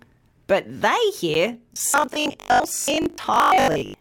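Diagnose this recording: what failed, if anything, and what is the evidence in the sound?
At about 1.34 s there's a short, hard-edged dropout, roughly 10 ms of dead silence cut cleanly into the sound. That's a gap between stream segments, so it's a network or streaming-playback problem. Two neighbouring segments have timestamps that don't quite meet, and the player pads the missing stretch with silence. Nothing is actually lost, the timeline just gets a small hole. It's consistent with a boundary between roughly one-second segments.

From 1.74 s right through to the end at 4.0 s, the sound turns into a rigid, metallic buzz pitched at 50 Hz that only loosely tracks what's underneath. This is most likely robotic sound from repeated short buffers, at the driver or buffer stage. Fresh audio isn't arriving often enough, so the software keeps replaying the last chunk. A 50 Hz buzz fits a 20 ms buffer being looped, with something like half the material being repeats rather than real audio.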